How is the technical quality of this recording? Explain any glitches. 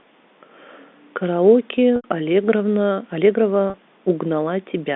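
The speech comes through a G.711 telephone-band line, heard as a narrow band from about 200 Hz to 3.6 kHz, and two short glitches interrupt it.

Packet loss with pitch repetition occurs at 1.96 to 2.04 s (80 ms) and at 3.70 to 3.74 s (40 ms). When audio packets went missing, the receiver filled each gap by looping the last pitch period. The shorter gap sounds like a briefly held, buzzy tone. The longer one holds, fades toward silence over about 50 ms, then cross-fades back into the speech. The gap lengths point to losses of 20 ms packets.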